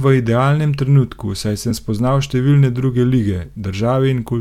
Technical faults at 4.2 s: none

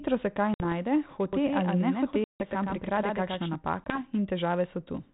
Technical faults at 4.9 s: none

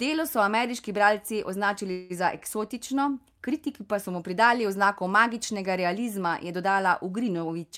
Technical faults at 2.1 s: call audio freeze

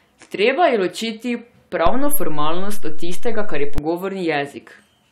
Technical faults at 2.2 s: DC step

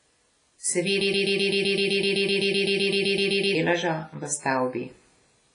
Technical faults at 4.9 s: WMA compression

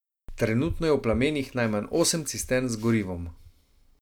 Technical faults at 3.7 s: none

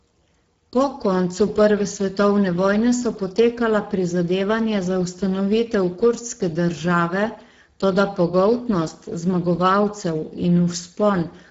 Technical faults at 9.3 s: Speex codec

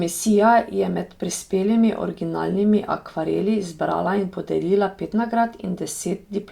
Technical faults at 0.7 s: none

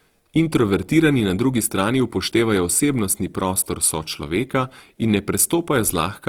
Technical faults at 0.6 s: Opus compression

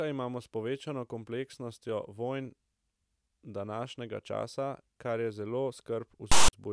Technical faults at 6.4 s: file tags played as audio

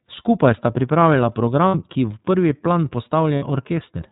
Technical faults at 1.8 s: iLBC codec; lost iLBC frames

